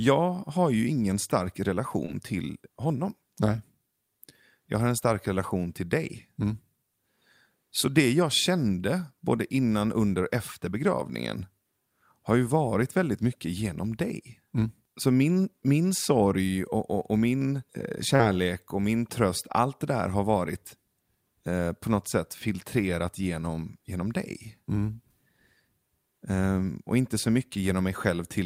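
At 2.05 to 2.10 s, after "har ju ingen stark", and again at 18.16 to 18.21 s, before "och min tröst allt", there's short concealed packet loss. About 20 ms and then 40 ms of audio arrived too late, and the decoder papered over each gap by extending the preceding sound. It comes across as a quick smear or wobble.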